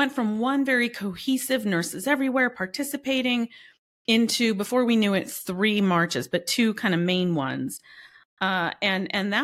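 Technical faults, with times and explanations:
No technical faults are audible in this speech recording.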